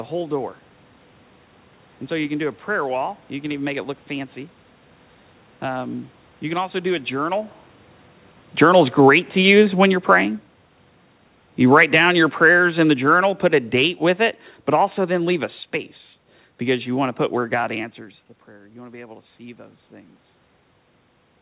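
At 8.47 s the automatic gain control judged the input too loud, or its background noise too strong, and began pulling its gain down, falling by about 4 dB until 10.4 s. A second automatic gain fall runs from 11.59 s to 15.46 s, falling by about 6 dB. Because the gain acts on the whole signal, the speech sinks together with the room noise behind it, a slow fade that can be heard in the narrowband call audio, which has nothing above 4 kHz.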